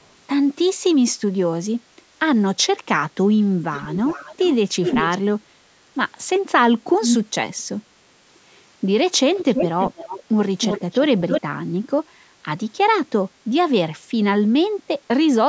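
Echo leak appears at 3.73–4.54, 4.83–5.18, 7.01–7.17, 7.58, 9.35–10.23 and 10.6–11.42 s: a discrete repeat about 400 ms late, then 318 ms, ranging from faint to as loud as the speech. That is likely a far-end echo canceller letting loudspeaker pickup through, unlike reverb's smooth decaying tail.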